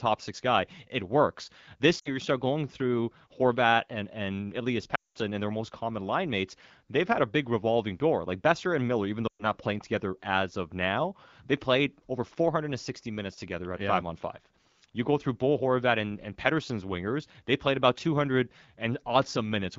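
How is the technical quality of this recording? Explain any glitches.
The recording is wideband AMR speech that sounds clear, consistent with a rate of 12.65 kbit/s or above, but it has three glitches from lost AMR speech frames.

At 1.99 s, just before "you start going through", about 60 ms of speech is lost. At 4.95 s, before "and their most common", about 200 ms is lost. At 9.28 s, before "not playing together as", about 120 ms is lost. In each case radio errors spoiled the frames, so the decoder repeated the last good pitch and vocal tract settings at falling gain. The sound smears and fades instead of cutting to a hard silent gap, and the longest loss dies away to near silence.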